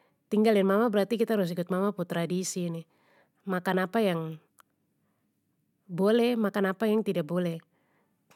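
Nothing goes wrong anywhere in this speech recording, so there's no technical fault to point to.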